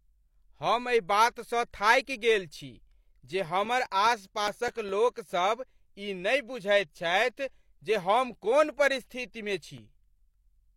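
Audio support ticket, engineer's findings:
CD scratch ticks, 3.24–5.09 s after "बातसँ थाकि गेल छी" (10 ticks) and 9.57–10.19 s after "हम कोन परिस्थितिमे" (4 ticks). Regular ticks of uneven strength, longest around 5 ms. Disc scratch defeating error correction once per revolution; player interpolating or muting lost samples.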